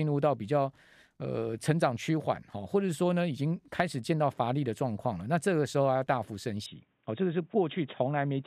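At 6.66 s the speech abruptly turns narrow and boxy, with no gap and no level jump, until the end. A spectrogram shows everything above 3.8 kHz cut off, plus a faint new noise floor, consistent with an input switched to a poorer device, likely.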